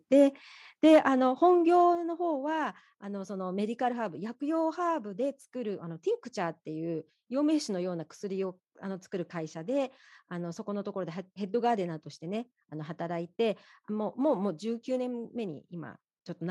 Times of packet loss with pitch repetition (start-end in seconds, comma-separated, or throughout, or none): none